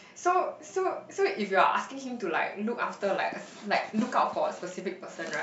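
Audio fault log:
No faults detected in this speech recording.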